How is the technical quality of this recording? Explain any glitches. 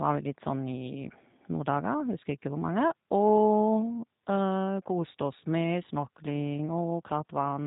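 Technical quality is limited by low-bitrate speech coding throughout the whole recording. The speech has been through the G.729 codec, consistent with an 8 kbit/s G.729A stream. Each 10 ms frame is rebuilt from a vocal tract filter, a pitch predictor and a handful of pulses, and nothing above 4 kHz survives. The voice therefore sounds muffled and band-limited, with a plainly audible rough, buzzy, synthetic edge.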